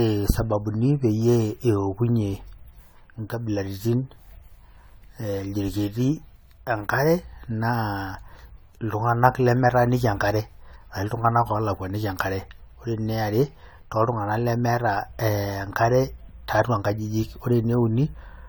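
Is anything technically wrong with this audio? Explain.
Yes. Generation loss runs throughout the speech: the audio sounds swirly, smeared and hollow, with blurred attacks and content up to 20 kHz. The likely cause is repeated re-encoding, around seven passes, consistent with AAC-LC at 96 kbit/s. Each pass requantises on a shifted frame grid, so noise and spectral holes build up.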